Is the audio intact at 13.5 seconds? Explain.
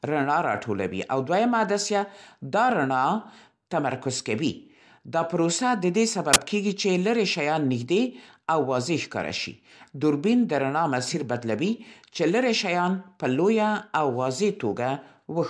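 Yes, at 13.5 seconds the speech plays through intact, with no dropout, click, distortion or other audible fault at that moment.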